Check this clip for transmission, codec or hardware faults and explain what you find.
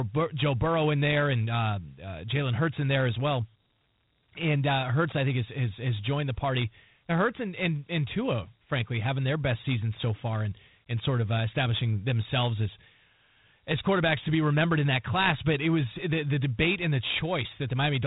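One codec fault runs the whole way through: Dialogic VOX ADPCM. Its coarse 4-bit step-adaptive coding, consistent with 32 kbps, cuts everything above 3.9 kHz and leaves a plainly gritty hiss trailing the speech.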